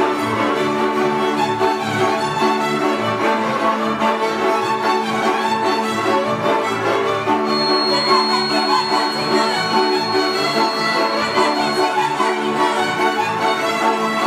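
From 7.42 to 11.95 s, a feedback whistle rings at 4.3 kHz, around 10 dB below the sound, swelling and fading. A speaker-to-microphone loop likely sat just short of howling.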